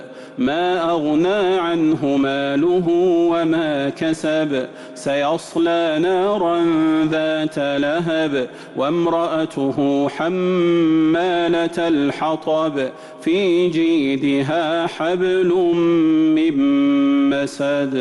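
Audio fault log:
Nothing stood out on listening, and no fault was heard at any point in the audio.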